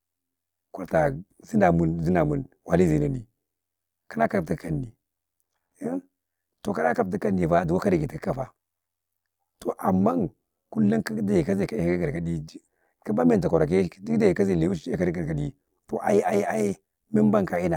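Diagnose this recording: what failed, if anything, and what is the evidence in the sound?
A metallic, robotic buzz runs through the speech from start to finish, the level pulsing by about 11 dB roughly 100 times a second. This is overlap-add ripple in the processing stage: windowed frames were rejoined with an overlap that doesn't sum to constant gain, so loudness dips once per frame.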